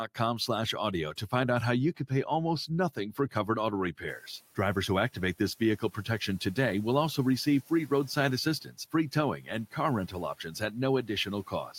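The noise suppressor mistook parts of the speech for background and pulled them down along with it, so the speech is cut by the noise suppressor three times. From 2.95 to 3.48 s, about a sixth of a second of sound drops by up to about 10 dB. It happens again at 8.64–8.76 s (about 12 dB) and 9.38–9.48 s (about 10 dB). Each time, the affected speech sounds swallowed and faint. The room noise that rises around 4 s remains well below the speech.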